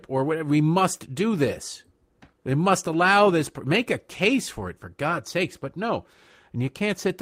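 A speech recording with nothing technically wrong in it.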